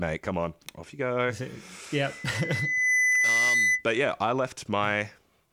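2.02–3.85 s: loudspeaker feedback squeal. The mic–speaker loop runs away at 2 kHz, swelling over about a second above the speech as one bright horizontal spectrogram line.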